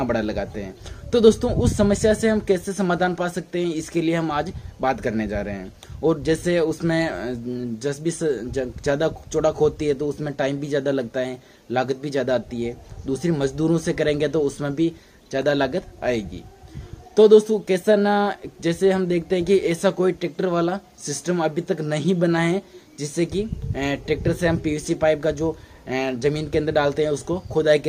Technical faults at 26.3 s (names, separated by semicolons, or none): none